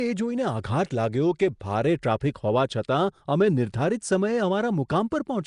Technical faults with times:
0.00-5.46 Nellymoser compression

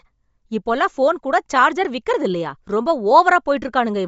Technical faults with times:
0.00-4.08 Bluetooth LC3 compression

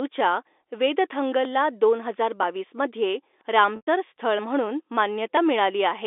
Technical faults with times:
1.45 audio missing between chunks
3.76-3.87 packet loss with pitch repetition
4.39 audio missing between chunks

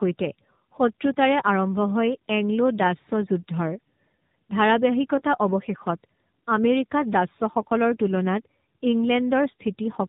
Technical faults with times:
0.00-10.08 tandem speech coding

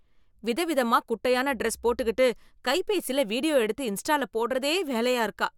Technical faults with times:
none

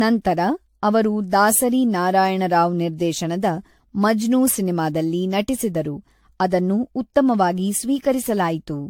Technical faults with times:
0.00-8.90 generation loss

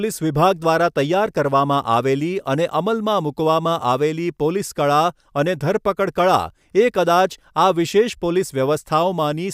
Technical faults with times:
none

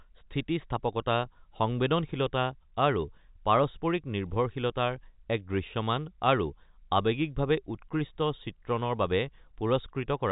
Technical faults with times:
none

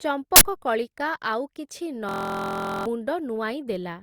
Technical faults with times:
0.36-0.44 uninitialised buffer
2.09-2.86 system hang loop

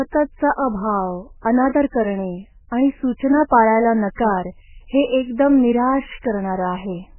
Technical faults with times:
0.00-7.19 MP3 compression

